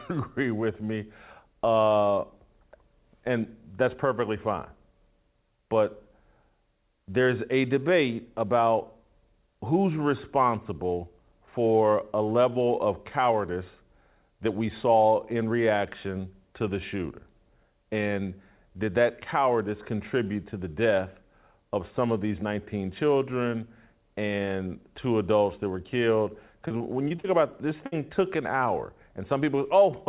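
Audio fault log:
26.68 to 27.94 s, repeated packet loss (robotic sound): Between "adults that were killed" and "took an hour", packets keep going missing. Each hole, up to 60 ms, is filled by stretching the previous sound. About 200 ms is patched, 16% of the span, so the sound turns choppy with pieces missing.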